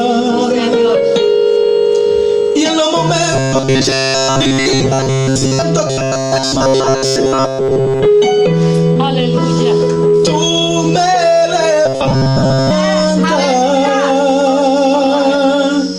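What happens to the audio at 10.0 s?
Right around there, from about 9.93 to 9.97 s, there's a short concealed packet loss. A chunk of audio didn't arrive in time, so the receiver covered the gap by stretching out the sound it had just played, about 20 ms of it, before fading back into the real signal. You hear it as a quick smear or little wobble, and whatever fell in that gap is simply gone.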